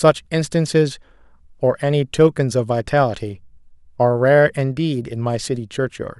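Nothing stood out on listening to this speech recording.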